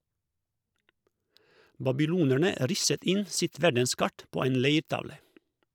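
A handful of samples, a small fraction of a millisecond, were likely lost from the stream at 2.36 s, just before "risset inn sitt verdenskart", and again at 4.42 s, after "inn sitt verdenskart på". Each of these dropped samples makes the waveform jump, heard as a single sharp click.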